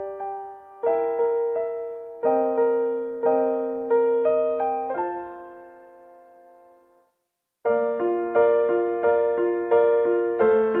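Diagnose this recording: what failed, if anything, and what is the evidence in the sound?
Nothing in the signal chain has failed: the recording holds continuity throughout, with no audible breaks, distortion or disturbances at any stage between capture and playback.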